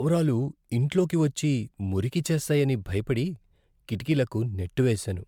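Across the whole of the speech, the sound has a swirling, hollow quality, with consonant attacks smeared and nothing above 19.9 kHz. That is more damage than a single MP3 pass at a rate around 136 to 138 kbit/s would leave, so the likely cause is generation loss: the audio was decoded and re-encoded roughly five times, each pass quantising on a shifted frame grid and compounding the noise and spectral gaps.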